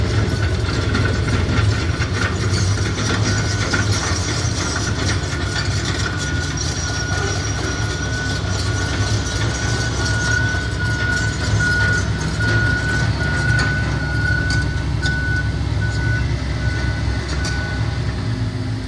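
Nothing in the audio stood out as a technical fault on listening.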